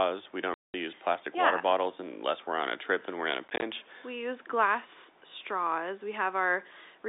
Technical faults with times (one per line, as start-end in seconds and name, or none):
0.54-0.74 packet loss filled with silence
3.48-3.62 packet loss filled with silence